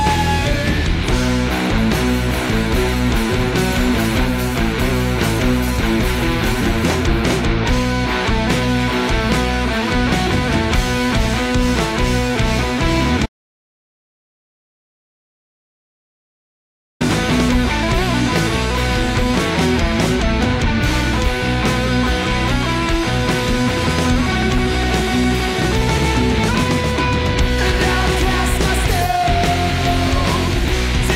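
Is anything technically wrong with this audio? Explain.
Yes. Audio dropout to silence from 13.26 to 17.01 s: the sound cuts off mid-flow into silence without room tone for about 3.7 s, likely because the input was lost while recording continued.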